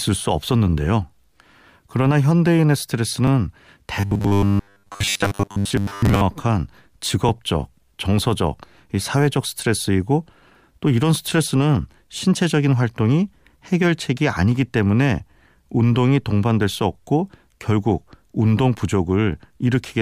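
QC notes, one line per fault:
3.27, 7.29, 11.30, 15.31 and 19.33 s: overlapping chunks. A 13 ms slice plays twice at each join, every 4.0 s, heard as a brief click or stutter. It is a single isolated doubling with no lasting tone, unlike a continuous buzz.
4.00 to 6.21 s: robotic sound from repeated short buffers. The sound becomes a rigid metallic buzz fixed at 100 Hz, most likely from a 10 ms buffer being replayed while most of the real audio is skipped. Unlike a one-off stutter, it lasts the whole span.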